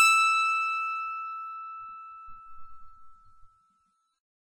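At 1.55 s the music drops abruptly to a lower-quality version and stays there to the end, the signature of an adaptive stream at a lower bitrate. A slowing connection forced the player onto a much leaner encode, and the sound points to a switch from roughly 128 kbit/s MP3 to something near 24 kbit/s. The treble thins, with more codec artefacts. On a spectrogram, everything above 10.6 kHz vanishes at that instant. The waveform shows no gap.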